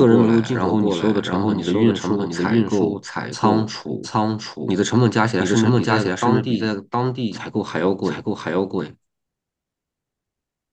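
Throughout the speech, a doubled audio track is present: a second full-band copy runs roughly 0.7 s behind the original at about the same level, with no decay or room colour. This likely comes from a slower second capture path.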